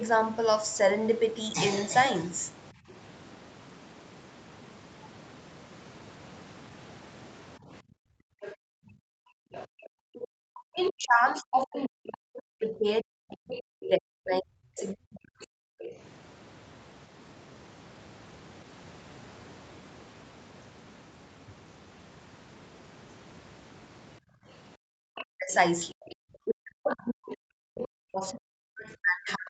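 The room background drops at 2.73 to 2.87 s by about 14 dB, then at 7.59 to 9.52 s and 24.2 to 25.07 s by nearly 40 dB. This is background gated by the echo canceller, which clamped the microphone while the loudspeaker played.

A faint second voice sits under the talker from 8.42 to 11.66 s, 13.51 to 15.92 s and 25.15 to 29.32 s. It is roughly 15 to 20 dB down. It is likely the other side's voice leaking through past the echo canceller.

From 9.74 to 15.72 s, and from 25.35 s to the end, the talker's voice dips by around 40 dB. Both sides are speaking at once, so this is likely speech suppressed in double talk.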